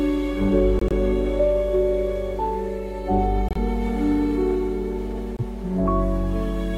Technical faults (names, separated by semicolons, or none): corrupt frame muted